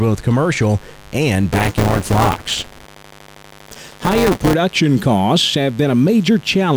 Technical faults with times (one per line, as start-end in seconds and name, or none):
0.00-6.76 mains buzz
1.53-4.54 buffer tearing